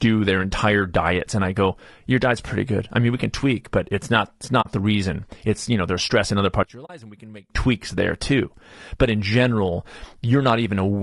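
Throughout the speech there is plainly audible low-delay AAC compression, likely AAC-ELD at a rate that fits about 32 kbps. Its short transform frames cannot separate the voice's harmonics cleanly, so noise fills the gaps between them and the voice sounds rough and grainy rather than simply muffled. That steady texture sets it apart from band-limiting or lowpass filtering, which would dull the sound without adding grit.

From 4.61 to 4.67 s comes AAC frame loss with muting: about 40 ms of signal, roughly two frames' worth, was zeroed by the decoder. The overlapping windows taper the sound down and back up, so the gap has soft edges. A hard dropout or buffer underrun would cut off abruptly and usually snap.

From 6.63 to 7.50 s the voice suddenly falls by about 20 dB. This is one channel inverted, likely heard through a mono sum: with one side's polarity reversed, the centred voice largely cancels and only a faint remainder survives. 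It returns at full strength once polarity is restored.

Inside that stretch, from 6.85 to 6.90 s, a second AAC frame loss with muting leaves another soft-edged hole of about 40 ms.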